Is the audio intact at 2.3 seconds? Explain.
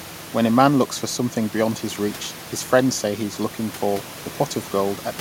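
Yes, at 2.3 seconds the speech is intact, with only the room's own background noise sitting about 19 dB beneath it.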